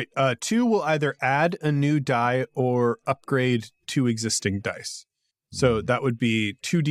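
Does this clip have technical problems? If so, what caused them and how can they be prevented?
No, the signal shows no technical faults, so there is nothing here that needs a cause or a preventive fix.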